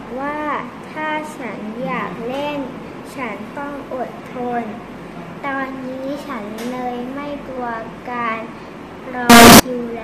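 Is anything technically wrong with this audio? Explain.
Yes, there's one fault. From 9.30 to 9.60 s the sound turns into a burst of loud, harsh distortion with quiet parts as loud as everything else. That's likely signed and unsigned mixed up, probably on 16-bit samples: flipping the top bit turns each zero crossing into a full-range jump.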